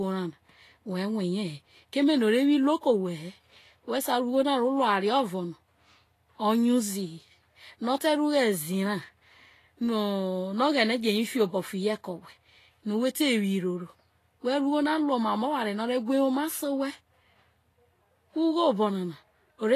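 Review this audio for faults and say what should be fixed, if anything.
Throughout the speech the treble sounds hissy and grainy, with blurred consonant attacks and nothing above 14.2 kHz. This is likely Vorbis compression at a low bitrate, around 33 kbps. Fine treble detail has been replaced by noise. A spectrogram shows a hard ceiling at 14.2 kHz and speckled high bands. To prevent it, encode at a higher Vorbis quality setting from a lossless master.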